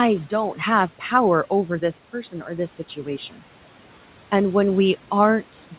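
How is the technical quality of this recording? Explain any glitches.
The one audible glitch is speech cut by the noise suppressor, from 3.3 to 3.41 s. The suppressor misjudged part of the speech as background noise and turned it down along with the room noise, by about 11 dB at its deepest, for roughly a tenth of a second. That stretch sounds swallowed and faint, as if the sound briefly ducks away. Around it, the room noise sits about 22 dB below the speech, and nothing above 4 kHz comes through, which points to a narrowband call codec such as G.711 A-law.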